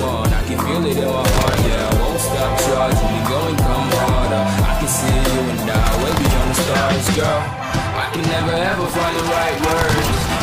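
Nothing stood out as a technical fault on listening to this audio.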